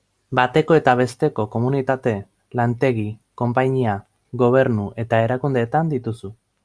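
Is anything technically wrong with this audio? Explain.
No, nothing technically wrong stood out on listening to this speech recording.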